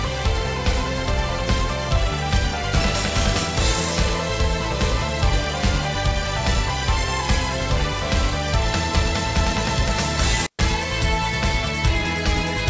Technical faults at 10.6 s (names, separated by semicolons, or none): intermittent contact